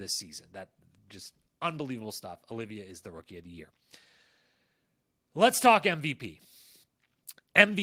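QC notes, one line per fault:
No faults heard in this recording.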